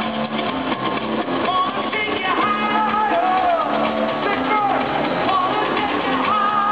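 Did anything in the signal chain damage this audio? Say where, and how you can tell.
Yes. From 2.37 s through to the end of the clip there is DECT cordless phone buzz, a thin, steady 100 Hz buzz rich in harmonics, sitting roughly 40 dB below the programme. The damage happens in the analogue wiring stage. A nearby DECT handset or base transmits a radio burst every 10 ms, and the audio circuit rectifies that RF. This turns the burst envelope into an audible 100 Hz pulse train that rides on top of the signal.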